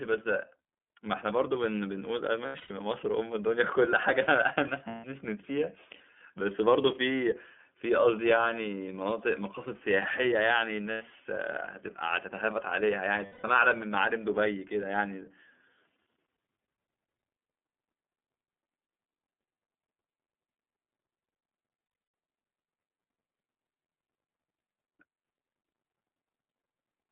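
Throughout, the iLBC codec squeezes the speech into a 200 Hz to 3.4 kHz telephone band in 30 ms frames, consistent with its 13.33 kbps mode, leaving it muffled, plainly rough and slightly synthetic.

Lost iLBC frames occur at 2.46 to 2.71 s, 4.89 to 5.05 s, 10.92 to 11.02 s, 13.26 to 13.45 s and 21.83 to 22.13 s. Each time, the decoder fills the missing audio by repeating the last pitch cycle mixed with noise. The result is 90 to 240 ms of a held, buzzy vowel, broken into short runs of up to about a tenth of a second in the first and last events. The voice recovers almost at once after each gap.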